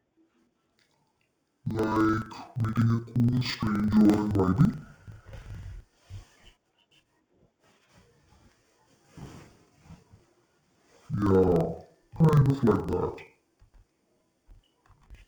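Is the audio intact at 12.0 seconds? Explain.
No. At 12.0 s the speech is still hit by the interleaved audio read as planar fault that runs through the whole clip. Each block of about 42.7 ms, which fits a 2048-sample block, has its alternating left and right samples split into a first and a second half, so both channels play at half speed side by side. Here that drops the voice a full octave, sounding doubled and choppy.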